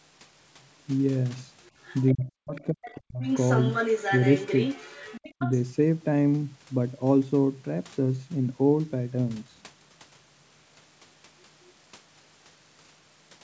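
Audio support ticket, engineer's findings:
Other side's voice leaking through: faint far-end scraps at 1.84–2.14 s, 2.55–2.64 s and 2.84–2.95 s, then a long stretch at 3.22–5.54 s nearly as loud as the talker. Likely residual loudspeaker echo the canceller didn't fully subtract from the mic.

Speech suppressed in double talk: talker's voice dips hard, close to gone, over 2.14–3.24 s, plus a milder brief dip at 5.38–5.5 s, both while the far end's playing. Likely the echo canceller couldn't separate the two and ducked everything.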